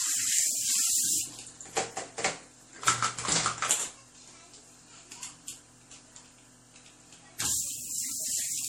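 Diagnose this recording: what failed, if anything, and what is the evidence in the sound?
Throughout the clip the sound has a swirling, smeared, hollow quality, with transients blurred and softened, and nothing is present above 18.3 kHz. The codec stage is at fault: this is likely generation loss, with the audio decoded and re-encoded about four times as MP3 at a rate that points to roughly 64 kbit/s. Each pass requantised the signal on a shifted frame grid, so noise and spectral gaps accumulated beyond what one encode would cause.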